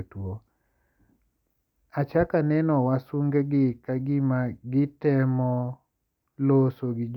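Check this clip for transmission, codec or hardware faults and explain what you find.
No transmission, codec or hardware faults.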